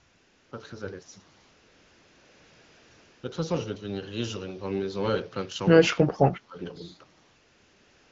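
From the start to 0.51 s, and again from 1.41 to 3.23 s, the background is replaced by AMR comfort noise. The phone stopped sending speech frames during these pauses, and the receiver generated a smooth, steady hiss from a coarse level and spectrum estimate. On a spectrogram these stretches show as flat, featureless bands that switch on and off abruptly at the segment edges. In the waveform they appear as an even, low-amplitude floor.

Between 5.84 and 6.57 s the voice dips sharply, by about 25 dB at its deepest, and thins out in pieces over most of that span. This is speech suppressed in double talk: the echo canceller likely could not tell the near talker from loudspeaker echo and attenuated everything. The waveform envelope caves in here, and the spectrogram shows the upper harmonics fading or breaking into gaps.

Inside that dip, from 6.32 to 6.41 s, a faint echo leak appears. It is a delayed copy arriving 127 ms after the original, about 25 dB below the speech. 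On the spectrogram it shows as weak, time-shifted repeats of the preceding harmonic pattern rather than new structure. The AMR-WB coding at 12.65 kbit/s sits under all of this with only light damage.

From 7.23 s to the end, AMR comfort noise returns, and the same smooth synthetic floor replaces the real background.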